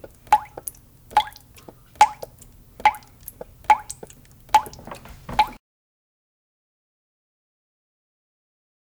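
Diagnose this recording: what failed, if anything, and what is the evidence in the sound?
Nothing failed; no fault is audible anywhere in this recording.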